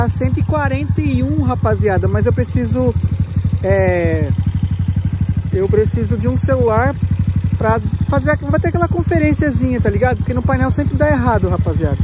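No technical faults can be heard anywhere in this clip.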